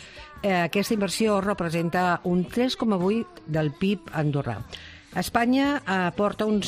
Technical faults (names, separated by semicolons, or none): none